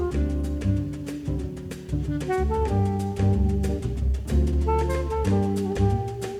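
Nothing is technically wrong with this audio, and no faults can be heard at any point in it.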